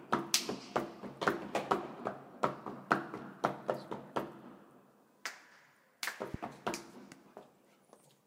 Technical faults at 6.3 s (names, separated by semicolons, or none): loud pop